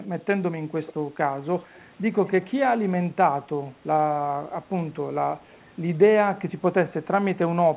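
At 0.87 s and again at 5.51 s, a faint, brief ghost of the speech trails the original by about 139 ms. The first is about 20 dB down and the second is barely there, around 35 dB below. This is echo leak, likely from a far end on loudspeaker whose echo canceller let a scrap of its microphone pickup slip back. The echo is carried within the narrowband, 4 kHz-limited sound of the call.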